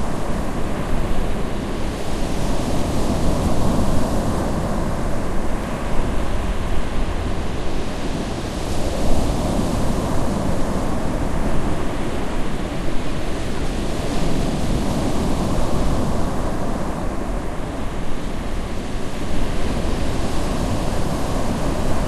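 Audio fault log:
5.64 s, repeated buffer: a tiny slice of about 1.45 ms, which fits a 64-sample buffer, plays one extra time because fresh audio came in late. With such a short repeat and hard joins, you hear it as a quick click rather than a stutter, and essentially nothing gets lost.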